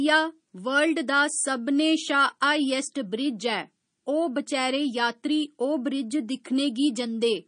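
MP3 compression, present from start to finish: nothing in the speech reaches above 9.8 kHz, and the sound has a plainly audible watery, swirling quality, with s sounds turning metallic and chirpy and consonant attacks smeared. The likely cause is an MP3 encoder starved of bits, which fits a low rate around 32 kbps. Short of data, it cuts the treble at a fixed point and drops weak frequency lines that flicker on and off between frames.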